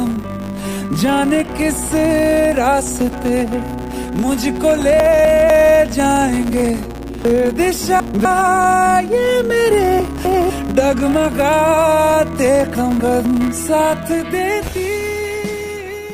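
From the first moment, a steady 100 Hz buzz sits under the sound and rises and falls with its level. This is a filter restarted on every block: each block, about 10 ms long, begins from silence with a small transient, and the repeated ticks merge into the tone.

Chunks out of order occur at 5.0–5.5 s, 7.25–8.25 s, 10.0–10.5 s and 12.75–13.25 s. The audio moves in 250 ms pieces, and one piece plays a chunk late, or three chunks late at 7.25 s, leaving a jumbled passage with hard joins.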